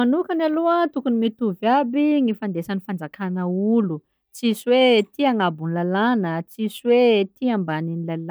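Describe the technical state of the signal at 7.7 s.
At 7.7 s the speech signal is intact, with no fault present at that moment.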